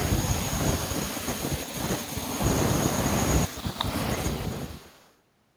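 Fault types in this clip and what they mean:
echo leak: From 4.47 to 5.15 s a faint delayed copy of the speech trails the original by about 255 ms, sitting well below it. The likely cause is a loudspeaker on the far end whose echo canceller let part of what its microphone caught back into the call.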